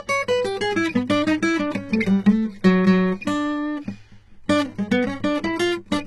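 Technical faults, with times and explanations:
Throughout, HE-AAC compression: gritty, metallic copied treble ending near 11.8 kHz, still bright unlike a low-pass, likely from a bitrate near 16 kbps.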